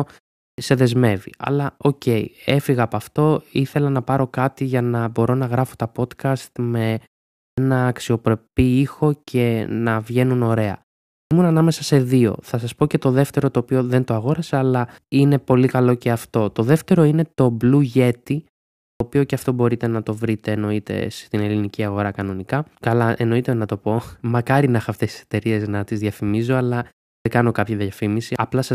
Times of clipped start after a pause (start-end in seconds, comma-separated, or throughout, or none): 0.51-0.58, 7.50-7.58, 11.23-11.31, 18.92-19.00, 27.18-27.25